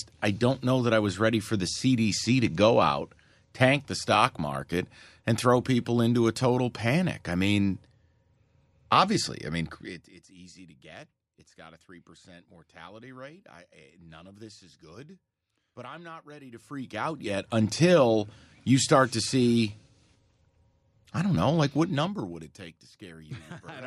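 At 9.72 s the level drops by something like 25 dB in about half a second, and you can hear zipper noise on it: the gain moves in 2 dB steps with no smoothing, so each jump leaves a little click, around thirty a second. It comes back up from 16.36 to 17.56 s with slower ticking, and drops again from 21.64 to 22.88 s, roughly 20 dB at a slow, countable rate.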